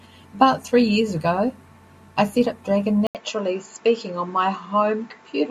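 At 3.07 s the speech drops out for 80 ms. When it returns, the tone has changed. Everything above 7.6 kHz is gone, so the voice sounds duller and boxy. The loudness stays about the same. A faint new background noise sits well below the speech. The cause is likely an input switched to a poorer device, a narrower-band microphone taking over mid-recording. This duller sound lasts to the end of the clip.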